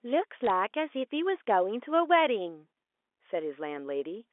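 From 0.44 to 0.50 s, bit errors on a digital phone line flip single samples of the telephone-band speech, producing sharp ticks that show as isolated waveform spikes and thin full-height spectrogram lines.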